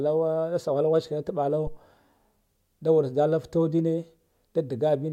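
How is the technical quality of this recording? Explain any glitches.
The recording has one clear glitch: a phantom power thump at 1.67 s, lasting until about 1.80 s. A supply was switched on or off on the live input, and that voltage step passed through the coupling capacitors as a single low-frequency pulse. It peaks at about −23 dBFS and dies away within roughly 30 ms. Unlike a plosive pop, it has no breath attack and isn't tied to the speech. Unlike handling noise, it carries no rustle or friction.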